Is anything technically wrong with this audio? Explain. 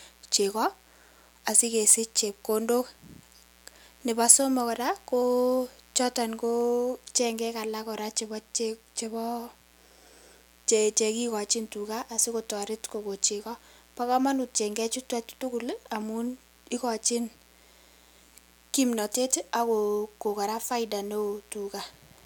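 Yes. A steady, raspy mains buzz runs underneath the speech for the whole clip, sitting well below it, about 30 dB down. It is a 60 Hz buzz with a gritty, bright edge rather than a smooth hum, because sharp switching spikes, as from a dimmer, rectifier or missing shield, are getting into the signal twice per mains cycle. Those spikes carry a dense ladder of 60 Hz harmonics up into the kilohertz range.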